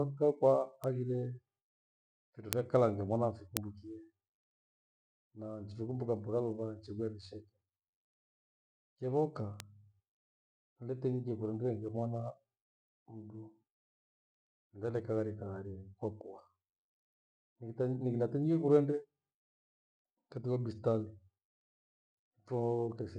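Single sharp ticks cut through the speech at 0.84, 2.53, 3.57 and 9.60 s, the two middle ones loud at about -4 dBFS, the others near -22 dBFS. Each is a bit error spike: a flipped bit briefly throws one or a few samples far off, then they snap back.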